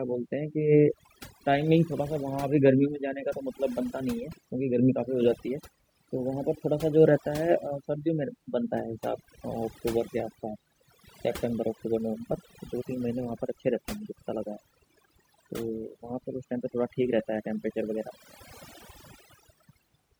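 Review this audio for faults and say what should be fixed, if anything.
Overdone noise removal runs throughout this speech clip. The noise reducer was pushed so hard that bands near its noise estimate are cut almost to nothing. Quieter parts of the voice vanish with them, leaving near-silent gaps with twinkling specks.

To prevent it, use gentler reduction settings and check the result by ear before committing.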